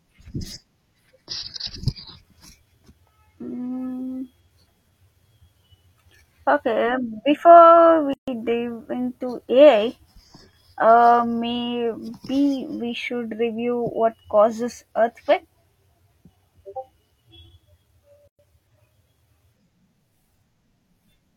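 Gaps at a join of encoded pieces open at 8.13 s (about 142 ms) and 18.28 s (112 ms), ten seconds apart. Each is a blank vertical band on the spectrogram and a flatline in the waveform with slightly smeared edges, left by untrimmed encoder delay and padding before the speech resumes.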